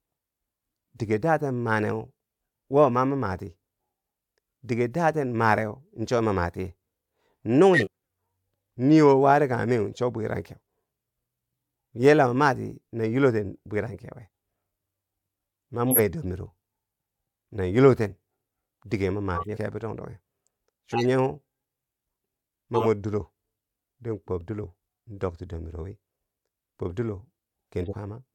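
Whole compressed frames go missing or are rejected by the decoder at 7.73 s, 19.34 s (just after "dige ma"), 22.73 s and 27.80 s. These are compressed frames skipped. The speech jumps forward by roughly a fifth of a second at 7.73 s, by about 0.15 s at 19.34 s and 27.80 s, and by only a few hundredths at 22.73 s.

Damaged bits in about two frames each are decoded and played anyway at 15.91 s and again at 20.92 s, lasting under a tenth of a second and about an eighth of a second respectively. These are corrupt frames decoded. Misread gains and codes scatter energy into the wrong frequencies, producing a loud error peaking around -5 dBFS at 15.91 s and a somewhat quieter one, around -10 dBFS, at 20.92 s.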